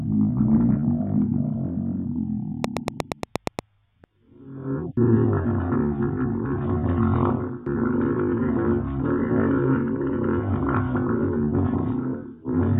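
From 2.64 s to 3.60 s a train of clicks rides over the sound: about ten near-identical pulses at a steady 8.5 per second, giving a regular ticking that stands out well above the program material, peaking around 20 dB over it. Something outside the audio itself is repeatedly injecting the same short transient into the signal path, with interference from nearby equipment or a faulty connection or power supply the likely source.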